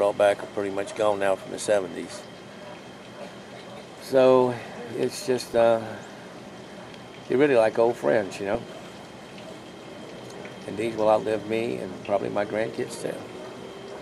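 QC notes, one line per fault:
5.42–5.62 s and 8.55–8.88 s, DAB burbling: weak reception left a bit error rate of roughly 0.1–0.2 percent, and some errors slipped past error correction into the MP2 audio data. Corrupted samples put short blips of noise in single sub-bands, and corrupted scale factors make sub-bands jump in level for up to a frame. Across ten and fifteen damaged frames respectively, this produces burbling over the programme. The second burst is longer.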